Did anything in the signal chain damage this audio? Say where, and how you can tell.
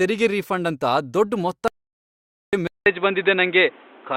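Yes. There is an audio dropout to silence from 1.68 to 2.53 s, just after "ರೀಫಂಡ್ ಅಂತ ದೊಡ್ಡ್". The speech cuts off mid-flow into about 0.85 s of silence with no room tone, so the input was likely lost at the device or driver stage while recording continued.

From 2.67 s to the end, the input switched to a poorer device, probably a headset's call profile. After a short gap at the switch, the speech comes back dull and band-limited, with nothing above 3.9 kHz. It also has a new noise floor well below the signal and a level shift of a few decibels.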